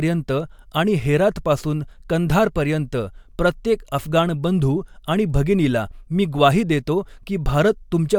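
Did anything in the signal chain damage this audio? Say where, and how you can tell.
No, nothing in this speech recording points to damage at any stage of the signal chain.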